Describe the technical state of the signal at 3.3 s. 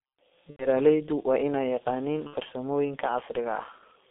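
At 3.3 s the speech carries G.723.1 codec damage, present across the whole clip rather than at this moment alone. The sound is squeezed into a narrow telephone band of roughly 200 Hz to 3.7 kHz and rebuilt from a coarse vocal-tract model refreshed only every 30 ms, which fits a bitrate near 6.3 kbit/s. The damage is heavy: muffled, hoarse tone with smeared consonants. A spectrogram shows a hard ceiling near 3.7 kHz, an empty band below 200 Hz, and blocky, frame-stepped harmonics.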